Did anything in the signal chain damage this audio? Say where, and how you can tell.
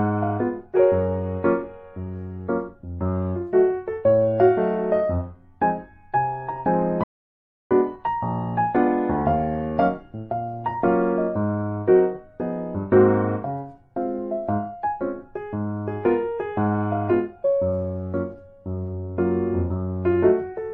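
Yes. From 7.04 s to 7.71 s the audio cuts out mid-flow for about 0.67 s. The gap is silent, with no room tone or noise floor underneath, and the sound resumes abruptly. That is an audio dropout to silence. The stage is likely the input side, at the device or link feeding the recorder: the signal was lost while the recorder kept writing zeros, so whatever occurred in those 670 ms is gone.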